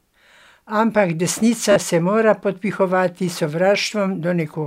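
At 1.72 s the speech breaks into a brief Bluetooth stutter lasting until 1.76 s. The receiver stopped getting audio data in time and filled the gap by replaying its last short buffer, so a tiny slice of sound repeats with a rough, buzzing quality. About 40 ms of audio is missing, which fits a few consecutive lost packets. When the stream returns, the speech jumps ahead as though it had kept playing through the dropout.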